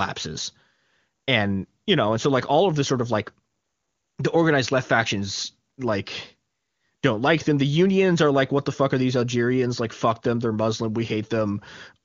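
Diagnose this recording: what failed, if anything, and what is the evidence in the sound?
Nothing failed in this recording; the sound carries no evidence of a fault at any stage.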